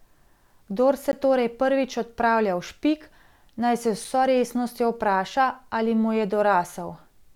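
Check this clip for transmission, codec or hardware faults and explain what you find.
Two faults, both the same kind: a block of digital silence at 1.12 s, just before "torej prvič odpravlja", lasting 15 ms, and another at 4.05 s lasting 5 ms. Each time the output buffer most likely wasn't filled in time, so samples became zeros. The hard cut in and out gives a tick rather than a smoothed or concealed gap.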